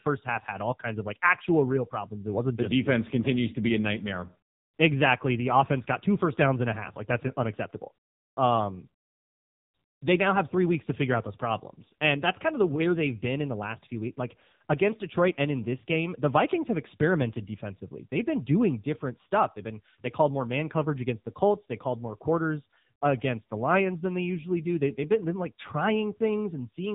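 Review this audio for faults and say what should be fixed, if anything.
The whole clip has been through the AMR narrowband mobile codec, and it's taken a beating. Nothing gets through above 3.8 kHz, and the speech sounds buzzy and synthetic because it's rebuilt from sparse pulses. That suggests a low AMR-NB mode, around 6.7 kbps. Next time, record or transfer it over a wideband path instead of a narrowband phone link.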